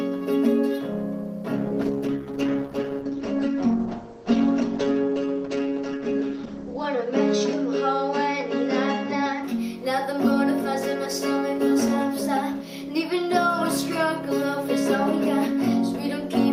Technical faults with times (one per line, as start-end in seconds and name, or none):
1.57-9.49 call bitrate drop